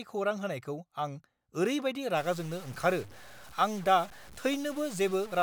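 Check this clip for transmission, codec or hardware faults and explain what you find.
There's one fault, and it runs from 2.17 s to the end of the speech. From that point a grit rides on the voice, and the gaps between phrases stop being clean and fill with hiss. That's the signature of a stuck bit, likely a data bit held at a fixed value by a bad line or converter, with a step of around -45 dBFS. Roughly half the samples land off by that amount, and in near-silent stretches the error changes as small values cross between positive and negative, so quiet parts turn to noise.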